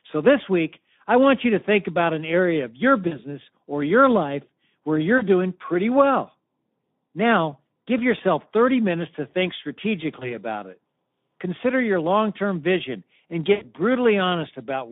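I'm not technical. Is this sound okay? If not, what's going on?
No, not quite. Two problems stand out.

First, the whole clip has Speex codec damage. This older internet-call speech codec squeezes the audio hard, so the speech sounds rough, hoarse and a bit noisy throughout, and it's narrowed to a thin telephone-like range with little depth or sparkle.

Second, there's VoIP packet loss concealed by the speech codec in four spots. Small chunks of the call data went missing, and the decoder guessed at the gap by stretching the last bit of sound, which comes out as a brief buzzy or smeared blip. You'll hear it at 3.07 s, right after "an area of your"; at 5.18 s, right after "or your life where"; at 10.19 s; and at 13.53 s, right after "long term vision and". Each is short, roughly 0.05 to 0.16 s, and the one at 10.19 s is the longest.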